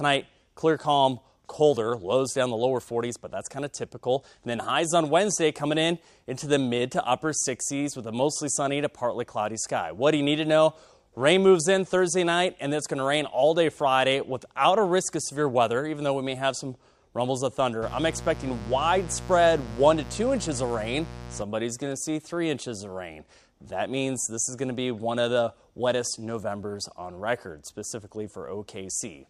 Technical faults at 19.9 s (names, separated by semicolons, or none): mains buzz